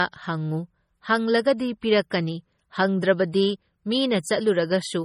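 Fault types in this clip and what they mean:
Low-bitrate audio saved at a high bitrate: The speech keeps MP3 artefacts that fit a 32 kbit/s source. It was likely re-saved at a far higher bitrate, which restores nothing.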